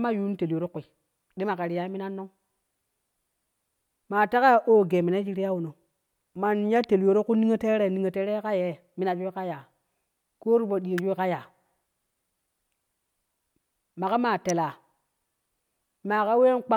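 Sharp snaps peaking around -15 dBFS at 10.98 s and 14.49 s sit on top of the speech, each an electrical switching spike likely caused by a nearby switch arcing onto the audio line.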